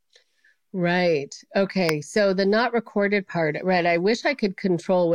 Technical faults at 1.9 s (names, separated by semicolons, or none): electrical switching spike